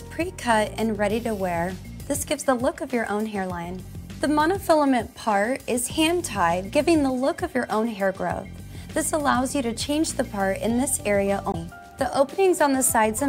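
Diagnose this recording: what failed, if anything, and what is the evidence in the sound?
Damaged data in a compressed stream, at the codec stage: from 11.51 to 11.55 s the decoder misreads corrupt frames and hunts for the next header. Unlike a buffer underrun, the fault lies in the stored data, not in delivery timing.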